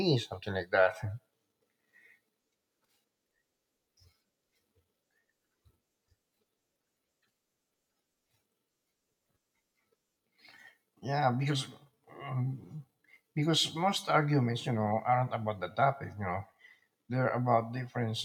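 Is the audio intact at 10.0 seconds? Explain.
Yes, the speech at 10.0 seconds is intact, with no audible fault at that moment.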